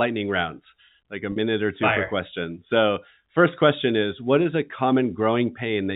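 At 1.32 s the speech briefly sticks on a slightly held, buzzy tone for about 40 ms, until 1.36 s. This is packet loss with pitch repetition: the receiver bridged a gap, which fits two lost packets, by replaying the last pitch period of the G.711 telephone-band signal.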